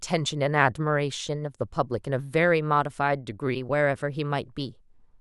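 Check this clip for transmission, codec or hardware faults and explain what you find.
No transmission, codec or hardware faults can be heard in this speech clip. Nothing in the audio points to a problem anywhere along its path.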